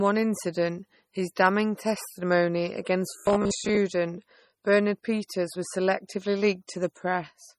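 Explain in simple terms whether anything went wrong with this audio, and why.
Two things went wrong.

The whole clip shows low-bitrate audio saved at a high bitrate. It sounds like a small, heavily squeezed MP3 that was later saved again as a large, high-quality MP3. The bigger file cannot bring back what the first squeeze threw away. The dull, smeared quality remains, and nothing above about 15.1 kHz survives. That is the likely cause of the flat, muffled top end.

From 3.11 to 3.78 s, just after "incident his damning testimony", there is robotic sound from repeated short buffers. The speech turns into a stiff, metallic buzz near 66.7 Hz. That pitch fits a tiny slice of about 15 ms being played over and over. Roughly half of that stretch is repeats, and the missing audio is skipped. The likely cause is audio arriving too slowly, so the player filled the gaps.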